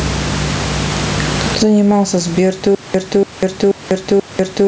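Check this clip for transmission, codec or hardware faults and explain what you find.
Two faults are audible in this speech clip. Gain pumping runs throughout. The gain swings by around 20 dB, likely from excessive input gain hitting a fast limiter. A stutter with silent gaps starts at 2.75 s and lasts to the end. A 288 ms fragment repeats four times, once every 483 ms, each followed by 195 ms of digital silence. This is consistent with a stalled stream replaying its last buffer, and the intervening audio is lost.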